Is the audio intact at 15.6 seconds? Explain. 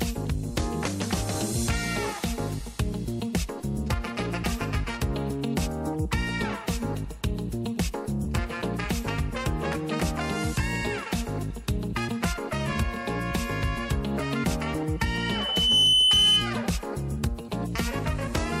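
No. From 14.99 to 16.53 s there is loudspeaker feedback squeal: the microphone picks up its own loudspeaker until a 3 kHz tone grows by itself. Unlike a steady interference whistle, it swells over roughly 0.7 s to around 10 dB above the sound.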